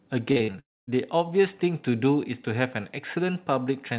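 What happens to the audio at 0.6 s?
At 0.6 s the sound cuts out in a long network dropout, running from 0.60 to 0.89 s. The sound stalls and smears into a short, fading buzz. It then falls to near silence for about 240 ms. This is likely a stretch where no packets reached the receiver. The receiver briefly stretched the last sound it had, then had nothing left to play. About 280 ms of audio never returns. When the sound resumes, that part is simply gone.

Just before this, from 0.32 to 0.56 s, there is repeated packet loss with a robotic sound. Four short holes open in quick succession. The longest lasts 44 ms. Each hole is patched by repeating the preceding sound. The patches come so close together that about half of this span is filled-in material rather than real audio. The result is choppy, with a robotic edge and small pieces missing.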